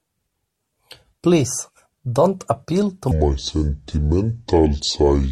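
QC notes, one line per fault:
3.11–5.31 s, section at the wrong speed: from 3.11 s to the end the speech plays at 0.645 times its recorded speed, so it drags noticeably and drops about seven semitones. Because playback rate alone sets both tempo and pitch here, the two shift together at the same instant, making the speech turn suddenly deep and sluggish. The likely cause is that this stretch was rendered against a mismatched clock during editing or playback.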